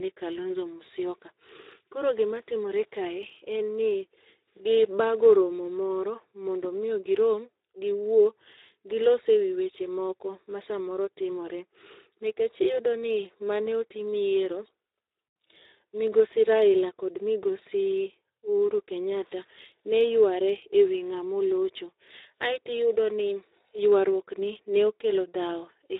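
Speex codec damage runs through the whole of this speech recording: the voice sounds noisy and hoarse, with nothing above 3.8 kHz, as the low-rate CELP coding leaves too few bits for the excitation, consistent with a bitrate near 11 kbps. Clock slip clicks run from 0.10 s to 25.98 s as a fast, faint rattle of single-sample ticks roughly every 30 ms, likely from two unsynchronised device clocks drifting by around 700 ppm, so one sample is dropped or repeated each time the error builds to a whole sample.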